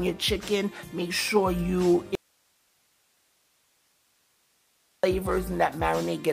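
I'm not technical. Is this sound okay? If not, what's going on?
No. From 2.15 to 5.04 s there's an audio dropout to a faint residue. The sound cuts out abruptly, leaving only faint hiss, likely a signal loss of about 2.9 seconds.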